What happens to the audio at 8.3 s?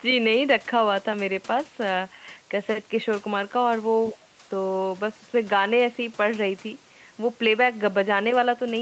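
At 8.3 s the speech is intact, with no dropout, glitch or distortion, just the same band-limited call sound, nothing above 8 kHz, that the Opus codec path gives it.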